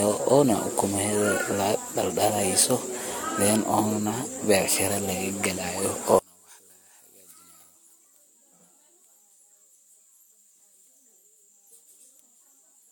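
A speech recording that sounds swirly, smeared and hollow throughout, with consonant attacks blurred and nothing audible above 17 kHz. This is generation loss, likely from repeated lossy encoding, about four passes, with a character that fits AAC-LC at around 96 kbit/s. Each re-encode quantises the signal again on a shifted frame grid, so the small errors and spectral gaps of every pass stack up, leaving the sound more degraded than a single encode at that rate would. From 6.19 s to the end, the centred voice drops away almost entirely when the audio is heard in mono, falling by about 25 dB and leaving only a faint residue. This points to one channel inverted, with the likely cause being reversed polarity on one side of the stereo pair. Material common to both channels cancels when they are summed, and only the small difference between left and right remains audible.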